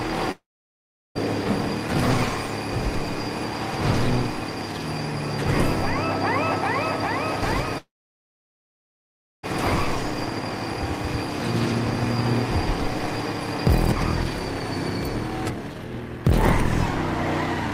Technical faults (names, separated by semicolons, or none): long network dropout